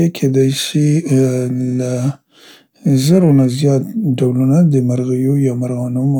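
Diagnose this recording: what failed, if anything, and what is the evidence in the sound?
The converter stage has periodic clock jitter from 0.40 to 3.56 s, ending just before "زیات ډولنه د". The sampling clock wobbles at around 2 kHz, which gives the speech a rough, metallic edge. A spectrogram shows sidebands about 2 kHz either side of each harmonic, strongest higher up. The waveform looks unchanged.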